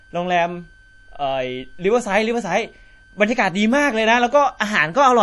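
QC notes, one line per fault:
Throughout, switching supply whistle: a thin, steady whistle around 1.5 kHz, wandering between about 1.53 and 1.57 kHz, sits roughly 35 dB under the speech. A switching power supply running in an audible burst mode, or beating against another supply, puts this tone into the signal path.
Throughout, MP3 compression: the speech sounds watery and swirly, with smeared consonant onsets and nothing above 11.5 kHz. The likely cause is MP3 coding at a starved bitrate, one that fits roughly 48 kbps: the encoder chops the treble and drops weak frequency lines that flicker frame to frame.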